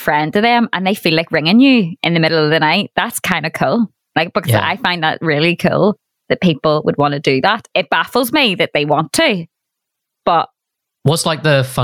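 From start to finish the speech has gain pumping. The level is squashed, with a gain swing of something like 15 dB. Loud and quiet passages end up closer in level. The likely cause is input gain set far too high, with a fast limiter or compressor clamping down on each loud moment and releasing in the gaps.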